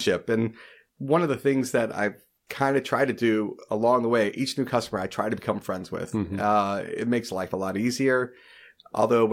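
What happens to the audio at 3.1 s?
Nothing goes wrong at 3.1 s; the speech there is intact, with no dropout, click or distortion.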